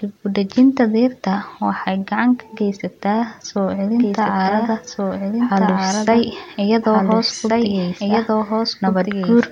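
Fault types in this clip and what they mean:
Doubled audio track: from 3.96 s to the end, a second full-band copy of the speech trails about one and a half seconds behind, at roughly equal level. It likely comes from a second, slower capture path.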